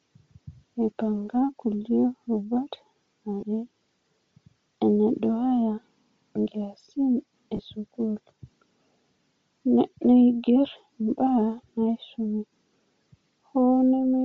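From the start, the speech has a breathy, grainy edge, with the upper range sounding thin and noise-filled rather than clear. This is likely Bluetooth LC3 compression, where sparse high-frequency detail is replaced with noise, at a rate that fits roughly 32 kbps with 7.5 ms frames. At 3.40 s and again at 7.56 s, the sound briefly smears into a short noisy blur lasting about 22.5 ms. These are lost LE Audio frames, where the decoder covered each gap by repeating the last spectrum with scrambled signs.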